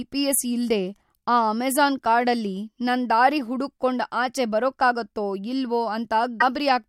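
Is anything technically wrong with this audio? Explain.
Yes. At 6.40 to 6.43 s, just after "ಆಚೆ ಬರಕ್ಕಾಗತ್ತೋ ಇಲ್ವೋ", the speech skips forward with a brief garbled glitch. Its length fits a single 24 ms frame. The likely cause is a broken MP3 bit reservoir: a frame was lost, so the next frame reached back for borrowed data and decoded the wrong bytes.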